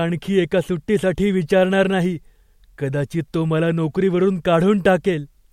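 No technical faults can be heard anywhere in this speech recording. There is nothing to place on a timeline.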